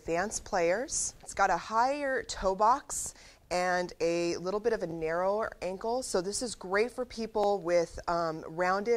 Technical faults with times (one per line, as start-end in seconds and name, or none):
2.39-2.41 overlapping chunks
4.91-4.94 overlapping chunks
7.44-7.46 overlapping chunks